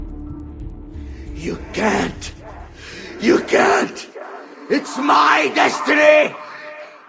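Throughout the clip, a resampler restarted on every block leaves a steady tick at 10 Hz, one every 100 ms, audible only while sound is present. Each block was converted in isolation during a 44.1 kHz to 16 kHz conversion, leaving small errors at every block edge.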